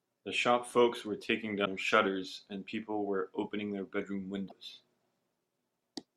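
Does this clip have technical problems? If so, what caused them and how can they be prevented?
Yes. The speech has two short bursts caused by damaged data in a compressed stream, from 1.62 to 1.67 s and from 4.45 to 4.52 s, each a blip of roughly 50 to 65 ms. At those points part of the encoded data was lost, zeroed or overwritten. The decoder misread or rejected the affected frames, lost sync, and searched for the next valid frame header, producing a brief glitch instead of the intended audio. To prevent it, transfer and store the file over checksummed or error-corrected paths and verify its integrity before decoding.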